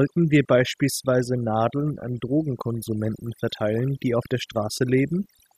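Overdone noise removal runs through the whole recording. A noise reduction stage set far too aggressively pulls down any frequency band sitting close to its noise estimate, taking the softer parts of the speech with it, so the background drops and breaks up into twinkling specks.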